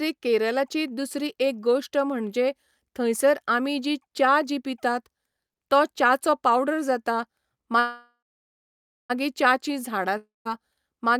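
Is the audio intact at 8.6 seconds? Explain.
No. At 8.6 s the audio is inside a call audio freeze from 7.79 to 9.12 s, likely from delayed packets draining the jitter buffer. The last sound is stretched into a fading buzz, then about 0.9 s of silence. Unlike a dropout, speech resumes where it stopped, with nothing lost, just 1.3 s later.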